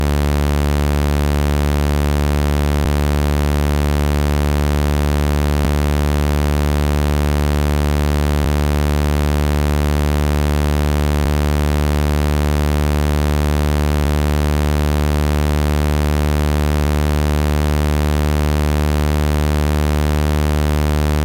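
At 2.85 s and 11.25 s the sound skips abruptly, losing about a fifth of a second each time, likely audio missing between chunks of a 3 s recording cycle.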